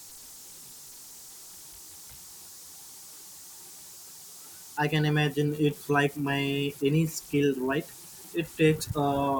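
A delta-sigma converter running without dither has fallen into repeating bit patterns, producing converter idle tones throughout this speech clip: a whistle around 7 kHz in the pauses and grainy noise under quiet passages, sitting about 22 dB below the signal.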